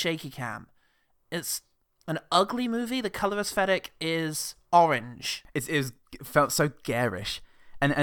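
No technical faults can be heard anywhere in the recording.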